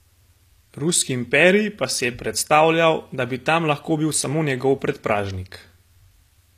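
Speech throughout, with a treble that sounds bright yet synthetic, gritty sibilants and nothing above 14.9 kHz: plainly audible HE-AAC compression, likely at a low bitrate around 24 kbps, rebuilding the highs by band replication.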